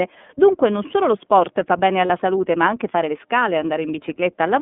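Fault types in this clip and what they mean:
iLBC codec: The speech sounds thin, slightly rough and synthetic, with plainly audible coding damage and nothing outside roughly 200 Hz to 3.5 kHz. This narrowband VoIP codec codes each 30 ms frame independently, at a rate that fits its 13.33 kbps mode.
Lost iLBC frames: At 2.07 s, between "lo sport fa bene" and "salute ma anche fare", a 30 ms gap is filled with a brief held, faintly buzzy sound. The decoder repeated the last pitch cycle with noise, and the voice returns almost immediately.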